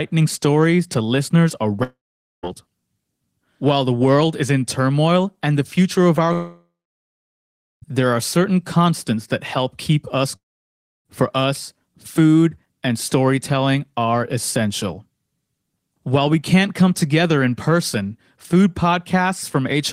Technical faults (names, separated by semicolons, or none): long network dropout